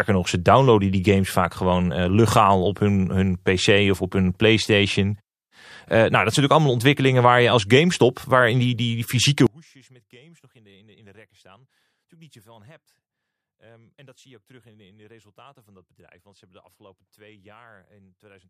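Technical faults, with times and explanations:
9.47–18.50 s, one channel inverted: after "die die die fysieke" the speech falls about 32 dB but doesn't go fully silent, likely reversed polarity on one channel cancelling in the mono sum, unlike a clean mute.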